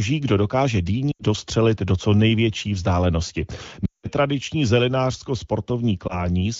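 Lost AMR speech frames occur at 1.11–1.24 s, 3.85–4.09 s and 6.07–6.26 s. Frames corrupted on the radio link were discarded, and the decoder filled the gaps by repeating its last good pitch and vocal tract settings at falling gain. The single lost frame near 6.1 s sounds like a brief dip, while the longer runs drop to near silence within two frames. The longest, near 4 s, fades toward silence before the speech returns weak or rough.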